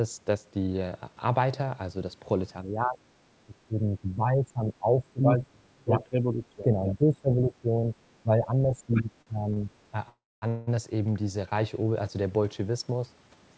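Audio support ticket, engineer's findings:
Speech suppressed in double talk at 2.64–2.99 s, 3.45–7.95 s and 8.23–9.70 s. Talker dips by up to about 20 dB. Likely the echo canceller ducking both sides under overlap.

Other side's voice leaking through at 8.94 s. Brief scrap, about 10 dB under the talker. Likely residual loudspeaker echo the canceller missed.

Short stall from a late packet at 9.22 s and 9.54 s. Sound held 47 ms, then 29 ms. Jitter buffer empty, last audio stretched, nothing lost.

Call audio freeze at 10.08–10.44 s and 10.48–10.69 s. Fading buzz or hiss, then 250 ms silence in the first. Likely delayed packets draining the jitter buffer. Audio resumes in place.

Jitter buffer slow-down at 12.96–13.37 s. Playback at 91% speed, pitch unchanged, 45 ms added. Repeated pitch periods or pause fragments rebuild the buffer reserve.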